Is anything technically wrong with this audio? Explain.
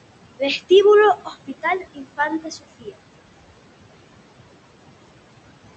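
Yes, there are two problems. Noise suppressor artifacts run throughout: the suppressor pulls steady-noise bands down by about 20 dB frame by frame, so the room noise, about 15 dB below the speech, pumps between phrases. Speech cut by the noise suppressor occurs from 1.16 to 2.19 s and from 2.4 to 2.95 s. The suppressor mistakes quiet speech for noise and drops it by about 19 and 20 dB, so a few hundred milliseconds in each stretch sound swallowed and faint.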